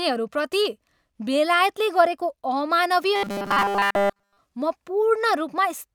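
From 3.16 s to 4.38 s the speech turns into a robotic sound, likely from repeated short buffers: with fresh audio arriving too late, essentially every slice replays the previous 5 ms, skipping real signal and imposing a rigid, metallic 200 Hz buzz that loosely tracks the speech.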